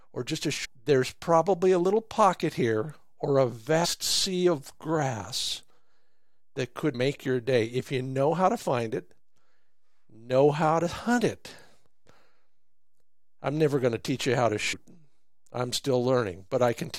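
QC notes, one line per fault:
0.64–0.66 s, 3.84–3.86 s, 6.93 s, 12.05 s and 14.72 s: damaged data in a compressed stream. Five brief glitches in the speech, each 20 ms or less, e.g. between "pocket here or a" and "sea of grass", just before "make your day if", and right after "teach you how to". Corrupt bytes make the decoder misread a frame and lose sync. It resyncs at the next header, so you hear a short glitch in the sound.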